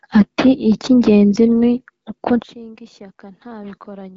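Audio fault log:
2.42 s to the end, one channel inverted: just after "ni uko" the speech falls by about 21 dB and turns faint, leaving only a residue. This is likely one stereo channel with flipped polarity. When both channels are summed to mono, the centred voice they share cancels almost completely, and only the small difference between them remains. The HD Voice band limit, with nothing above 7.7 kHz, carries through unchanged.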